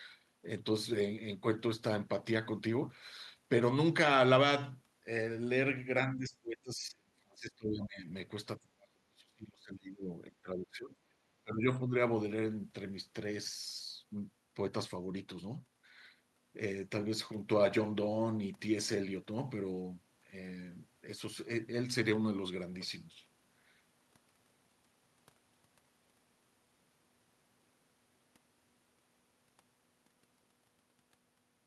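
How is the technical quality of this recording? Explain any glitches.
The speech is repeatedly pushed down in a cluster of dropouts between 6 and 12 seconds, and its top end stops near 12 kHz, which fits a call codec such as Opus.

Speech suppressed in double talk, at 6.14–8.06, 8.58–10.08, 10.28–11.24, 11.43–11.67 and 11.84–11.94 s, is likely an echo canceller that could not separate this talker from loudspeaker echo while both sides spoke, so it attenuated both. The speech sinks by about 30 dB at worst, lighter later, and breaks into fragments.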